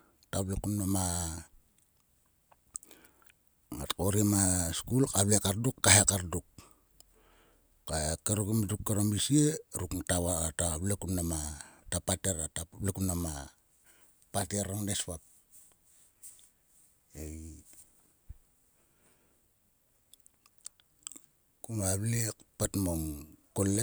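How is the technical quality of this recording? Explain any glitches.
The speech carries a recurring glitch. From 0.42 s to 23.75 s, about fifteen clicks arrive every 1.56 s, the signature of clock drift buffer slips. The likely cause is two clocks differing by roughly 200 ppm, forcing a slip of around fifteen samples each time. Their strict regularity separates them from random packet-loss dropouts.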